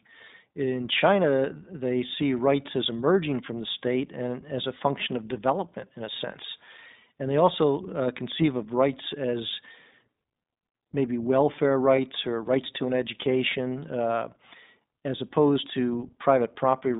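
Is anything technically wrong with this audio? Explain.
Yes. The whole clip passed through the iLBC codec, a narrowband VoIP coder that codes each short frame independently; the sound points to its 15.2 kbps, 20 ms mode. Nothing above about 3.7 kHz or below 150 Hz survives, and the speech has a plainly audible rough, synthetic edge.

There are also lost iLBC frames at 8.42 to 8.45 s, between "they also uh" and "of rights as", and at 11.96 to 11.99 s, between "maybe welfare" and "or rights to an". Each gap fits a single missing 20 ms frame. The decoder filled it by repeating the last pitch cycle with added noise, giving a brief held, slightly buzzy tone before the voice snaps back cleanly.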